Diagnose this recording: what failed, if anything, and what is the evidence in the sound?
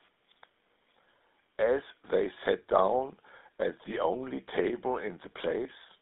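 The GSM full-rate codec stage throughout. The speech has a buzzy, gravelly roughness, bandlimited to about 250 Hz to 3.7 kHz, which fits the 13 kbps pulse-excited codec.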